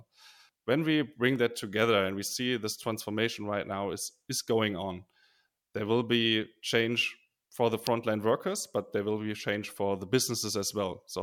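At 1.36 s, just before "that together and we", there's a quick snap riding on top of the speech. It's an electrical switching spike, likely a nearby switch or motor arcing and getting picked up by the audio line. It's fairly quiet, peaking somewhere around -30 dBFS. A second, much louder one lands at 7.87 s, right after "for the" and before "workers but there will", and jumps up to around -15 dBFS, so it really cracks.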